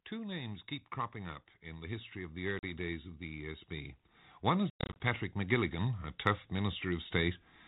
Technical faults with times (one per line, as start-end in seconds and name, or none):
0.09-7.43 automatic gain rising
2.59-2.65 packet loss on an ADPCM call
4.70-5.01 packet loss on an ADPCM call